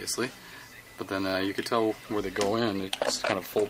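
From 2.6 s to the end of the clip, the sound turns coarse and muffled, with the top end dulled. This is a call bitrate drop: the encoder was pushed to far fewer bits, which fits a fall from roughly 64 kbps to about 19 kbps.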